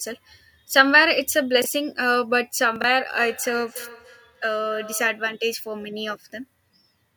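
A speech recording with two brief jumbled stutters and a later stretch of ringing echo. At 1.62 to 1.66 s and again at 2.76 to 2.84 s the sound briefly garbles, as if a sliver of it were shuffled. This is chunks out of order: a 20 ms block of audio arrived late and was played after the blocks meant to follow it. At 1.62 s the displacement is one block; at 2.76 s it is three, so that jumble is longer. Nothing is missing, but each misplaced block leaves hard joins. From 3.15 to 5.34 s each stretch of speech returns roughly every 300 ms, thinner and more metallic, reaching about 17 dB below the speech at its loudest. That is feedback echo between two devices: a second device on the same call replays what the first microphone sent, that microphone picks it up again, and neither echo canceller removes the other device's playback.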